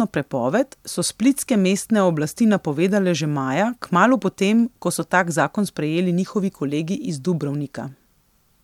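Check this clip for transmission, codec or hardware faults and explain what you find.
Nothing in this speech recording stands out as a problem, so there's nothing here to chase down.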